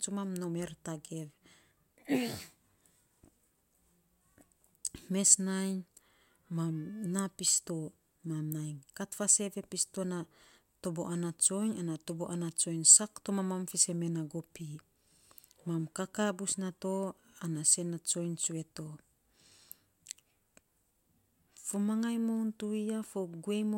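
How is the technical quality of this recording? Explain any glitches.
No glitches turn up anywhere in this recording, so there's really nothing to explain here.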